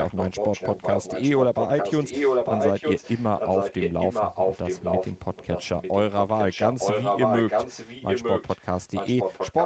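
From 0 to 9.65 s a second copy of the speech trails the original by about 0.9 s at roughly equal loudness, likely an echo leak from a loudspeaker whose echo canceller let the talk through. Unlike reverberation, it repeats as a distinct delayed copy.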